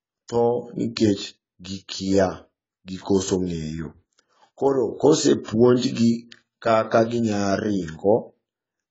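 Throughout, the speech sounds dull and smeared with a fizzy, warbling edge and nothing above 7.7 kHz. This is likely heavy AAC compression at a very low bitrate, around 16 kbps.

From 5.44 to 5.48 s, a short hiss runs about 42 ms ahead of a sharp onset, softening it. This pre-echo comes from the codec spreading quantisation noise across the whole block.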